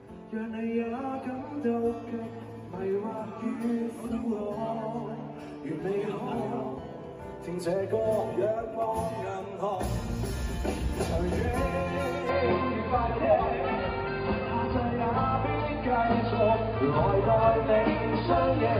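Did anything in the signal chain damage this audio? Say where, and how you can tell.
Yes. At the capture stage, the input likely switched to a poorer device at 12.29 s, lasting to the end. Nothing passes above 4.9 kHz after that, so the sound turns dull and boxy without a gap. The level shifts by a few dB, and new noise sits roughly 30 dB down.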